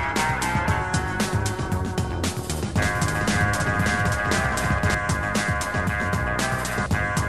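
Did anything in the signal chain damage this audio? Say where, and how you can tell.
Yes. Between 2.79 and 4.95 s there's a doubled audio track: a second, full-band copy of the sound trails the original by about half a second, sitting a few dB quieter. It has no decay or room colour, so it isn't a reverb tail, and it switches on and off abruptly at those edges. That points to the likely cause: a slower second capture path feeding the mix, or an edit leaving two out-of-step copies stacked.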